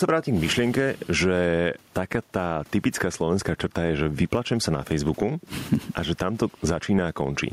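Speech recording with gain pumping across its full length, a level swing of around 10 dB. The room noise sits about 40 dB below the speech, and the speech itself sounds squashed, with loud and quiet syllables pressed close together. The likely cause is an input gain set far too high, with a fast limiter or compressor clamping down on every peak.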